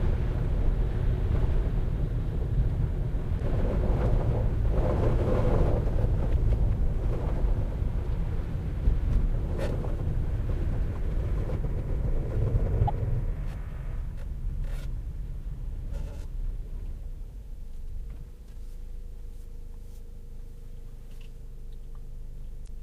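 Damaged data in the compressed stream makes the decoder misread corrupt frames and lose sync while it hunts for the next valid header, producing brief chirps or blips lasting about 55 ms, at 3.36–3.41, 6.31–6.37, 12.84–12.90, 15.87–15.93 and 22.64–22.69 s.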